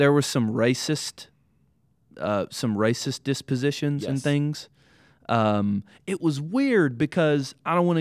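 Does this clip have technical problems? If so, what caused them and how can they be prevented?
No, nothing stood out as a technical problem on listening, so there is no cause to trace or prevent.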